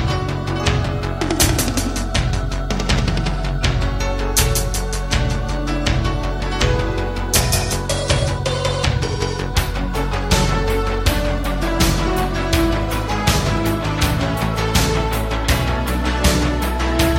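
Nothing in the audio stood out as a technical problem on listening.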